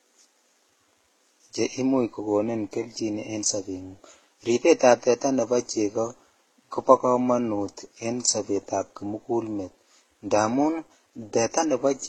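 Throughout this speech clip the sound is smeared and metallic, with swirling, watery artefacts layered over a dull, band-limited top end. This is likely transcoding between lossy codecs: the mix of artefacts fits a low-rate HE-AAC pass around 16 kbit/s, re-encoded through Vorbis and then HE-AAC again.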